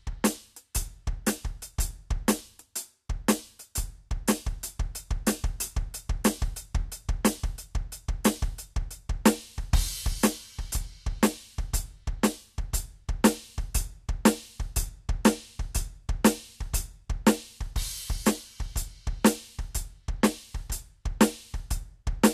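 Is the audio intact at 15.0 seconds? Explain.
No. The music has channel delay (comb filtering) from 14.89 to 15.95 s. One channel lags by roughly a single sample, about 0.02 ms, before the mono sum. The first cancellation falls near 20 kHz, so the top end sounds dulled.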